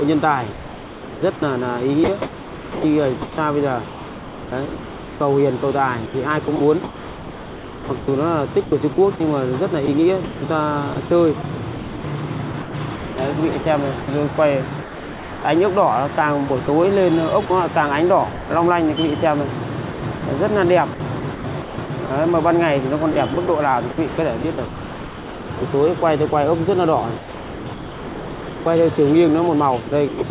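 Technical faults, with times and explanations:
0.52–5.2 s, 6.06–15.44 s, 16.48–17.5 s, 19.92–22.1 s, 23.12–26.32 s, 27.18–28.66 s and 29.88–30.22 s, sound chopped by the voice detector: the audio breaks up repeatedly, with stretches swapped for a flat, hissy fill of about 2.8 s, 3.1 s, 0.08 s, 0.58 s, 1.3 s, 1.4 s and 0.18 s respectively. The likely cause is a sender-side voice detector toggling transmission on and off and the receiver filling each gap with comfort noise, all heard through a narrowband call path with nothing above 4 kHz.
18.32–18.5 s, sound dropped by the voice detector: for 180 ms the sound gives way entirely to steady synthetic noise, then returns. This is likely the voice detector mistaking a quiet passage for background and stopping transmission, leaving the receiver to generate comfort noise in place of the missing audio until the detector triggers again.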